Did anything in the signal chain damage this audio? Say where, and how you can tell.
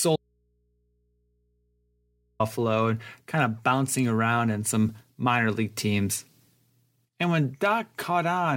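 Yes. An audio dropout to a faint residue runs from 0.16 to 2.40 s. The speech cuts off abruptly for about 2.2 s, leaving only mains hum roughly 45 dB below it. That likely means a broken analogue connection, where the open input stays live and picks up hum.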